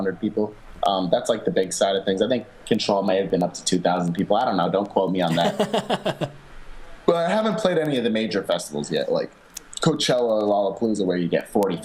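From 0.19 s to 11.74 s, a steady train of ticks runs under the sound. These are word clock ticks. The receiving device runs on its own clock, not locked to the sender's. The two clocks differ by something like 200 ppm. Each time they slip past each other, one sample is dropped or repeated. That happens about ten times a second, giving around a hundred ticks in all. Each is a brief, sharp click at a regular rate.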